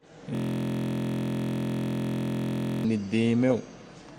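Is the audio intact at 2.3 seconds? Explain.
No, 2.3 s falls inside a system hang loop from 0.35 to 2.84 s: the system froze and a 23.2 ms buffer-sized slice, which fits a 1024-sample buffer, repeats as a steady 43 Hz buzz.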